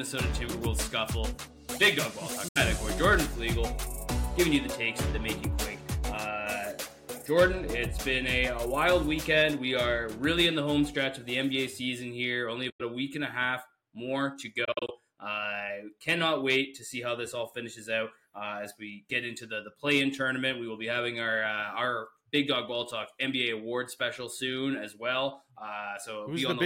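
Silent gaps at 2.48–2.57 s, 12.70–12.81 s, and scattered through 14.65–14.91 s, likely a Bluetooth dropout, show as blank spectrogram columns and flatlined waveform.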